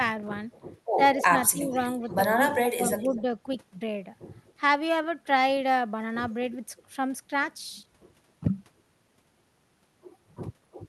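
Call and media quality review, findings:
Echo leak at 0.52–0.62, 1.19–1.25, 1.70–2.03, 2.51–3.22 and 4.47–4.53 s. Delayed copy of the speech, about 10 to 35 dB below it, trailing by a fixed 246–247 ms. Likely residual echo passed by the far-end canceller. The constant lag and copied content rule out room reverb.

Speech suppressed in double talk, 1.28–1.84 and 2.74–3.28 s. Speech level dips in pieces, about 10 dB and then about 25 dB at its deepest, overlapping the echo bursts. Likely the canceller attenuating its own talker along with the echo during overlap. Gated dips tied to overlap, not steady codec loss or dropout.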